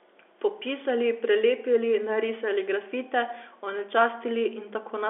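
No technical faults can be heard anywhere in the speech. The G.711 telephone coding it passes through is working normally, heard as the narrow telephone band of 300 Hz to 3.5 kHz with nothing above 3.8 kHz.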